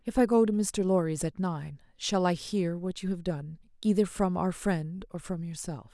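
Speech recording; no technical fault can be heard anywhere.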